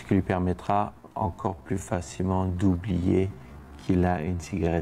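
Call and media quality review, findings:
Time-stretched section, 0.96 s to end: pace drops abruptly while pitch holds; audio turns drawn out. Playback runs at about 0.645x speed. Likely cause: length-fitting stretch in a processing or playout stage, pitch-preserving algorithm repeating short segments to lengthen audio.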